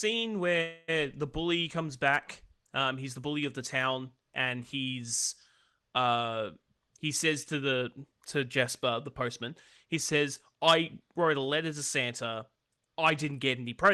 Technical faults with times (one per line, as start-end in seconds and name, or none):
0.61-0.90 call audio freeze
6.62-8.46 jitter buffer speed-up
8.89-11.15 jitter buffer speed-up
12.81-13.63 jitter buffer speed-up